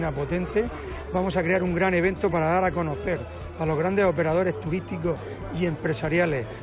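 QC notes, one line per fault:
No faults found in this clip. There is nothing to log.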